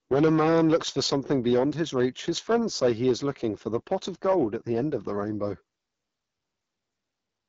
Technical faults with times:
0.00-7.48 AMR wideband (HD Voice) codec

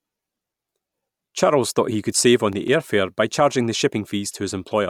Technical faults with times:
2.38-2.68 CD scratch ticks

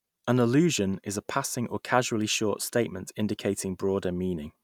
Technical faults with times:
none

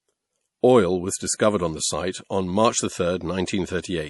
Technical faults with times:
0.00-4.09 MP3 compression
1.37-1.40 pre-echo
3.45-3.48 pre-echo

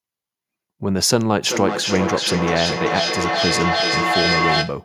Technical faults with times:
1.44-4.84 feedback echo between two devices

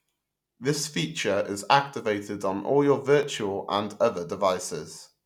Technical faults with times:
3.23 repeated buffer

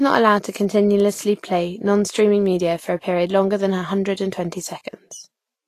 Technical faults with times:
0.00-5.68 Vorbis compression

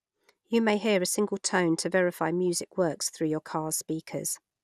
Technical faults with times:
0.00-4.64 MP2 compression

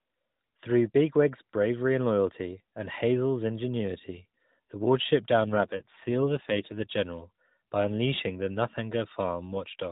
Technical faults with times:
5.44-6.96 AMR rate drop

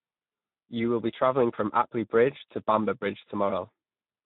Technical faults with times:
0.00-4.25 Speex codec

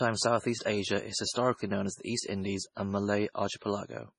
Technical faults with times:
0.00-4.19 MP3 compression

